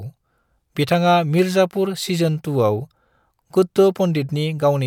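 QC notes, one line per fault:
Nothing to flag on this speech clip; I listened all the way and heard no faults worth a line.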